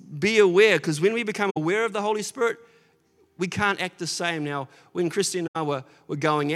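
AAC frame loss with muting hits this speech recording at 1.50 s, just after "because when we become", and at 5.46 s. The decoder zeroed the missing frames' spectrum, so overlapping windows fade into soft holes of 64 ms and 85 ms, consistent with three and four lost frames.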